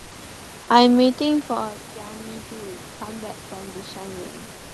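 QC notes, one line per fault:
0–0.11 s, comfort noise in place of the background: the room tone is steady, featureless and about 2 dB quieter, likely synthetic fill during discontinuous transmission.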